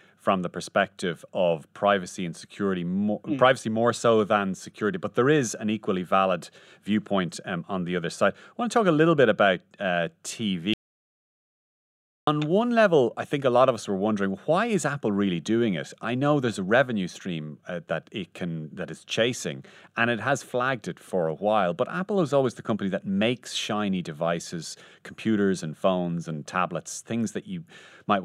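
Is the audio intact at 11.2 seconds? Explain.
No, 11.2 s falls inside an audio dropout to silence running from 10.74 to 12.27 s. The speech cuts out for about 1.5 s into dead digital silence, no room tone at all, likely because the input was lost while silence kept being written, then picks up at "one level I think".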